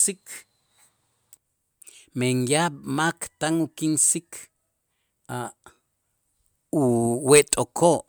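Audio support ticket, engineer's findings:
No faults found on this recording.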